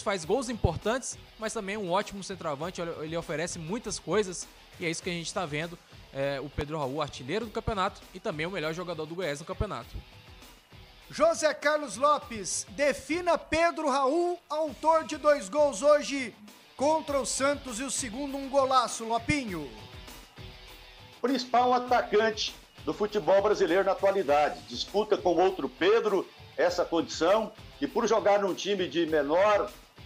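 A loud pop sits at 6.61 to 6.63 s, a single sharp burst standing around 10 dB above the surrounding sound, which continues unbroken beneath it. It is likely a brief voltage spike, such as a switch, static discharge or driver glitch, added to the signal and shaped into a short thump by the circuitry downstream.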